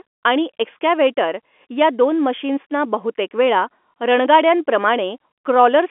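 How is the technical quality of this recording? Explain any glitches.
No glitches turn up anywhere here; it's ordinary G.711 telephone coding, so the speech sits in the phone band of roughly 250 Hz to 3.4 kHz with nothing above 3.7 kHz, which is simply what a phone line sounds like.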